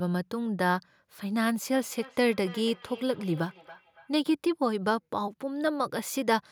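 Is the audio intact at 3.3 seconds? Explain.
No. At 3.3 seconds the speech is caught in a feedback echo between two devices, which runs from 1.74 to 4.21 s. A second device in the same room plays back the speech, and this device's microphone picks it up again. Its echo canceller only removes its own playback, so that copy goes out again. Each word returns at a fixed interval of roughly 300 ms, thinner and ringing, at about -21 dB below the speech.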